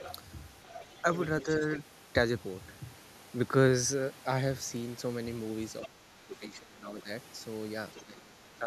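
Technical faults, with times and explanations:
0.0–0.15 s, 0.63–1.24 s, 1.41–1.75 s and 7.96–8.03 s, other side's voice leaking through: A second, fainter voice sits under the main talker. It is roughly 15 to 20 dB quieter, weakest in the third and last scraps. It comes in brief pieces, not a steady stream. The likely cause is a device playing the far end on a loudspeaker. The echo canceller then failed to strip that sound from the microphone signal.
1.42–1.78 s, 5.8–7.09 s and 8.03 s to the end, speech suppressed in double talk: The main voice sinks while the other side is talking. The first dip is slight, around 5 dB, and brief. The middle one goes roughly 15 dB down and lasts about a second. The last is the strongest, near 20 dB. Both sides were likely speaking at once. The echo canceller could not tell its own talker from the echo, so it turned everything down.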